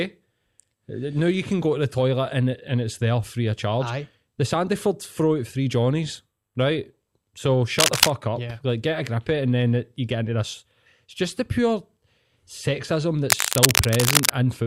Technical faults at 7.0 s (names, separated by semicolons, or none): none